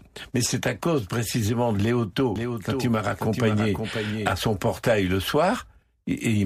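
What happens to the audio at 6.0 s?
At 6.0 s the speech carries on intact, with no dropout, click, distortion or other fault at that point.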